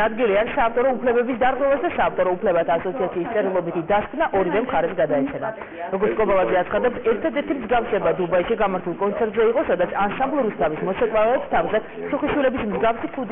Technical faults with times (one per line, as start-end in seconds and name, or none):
0.00-13.31 aliasing